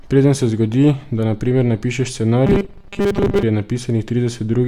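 From 2.47 to 3.43 s, right after "da na primer napišeš", the speech becomes a rigid metallic buzz near 200 Hz: robotic sound from repeated short buffers, likely about 5 ms segments looped for most of that stretch.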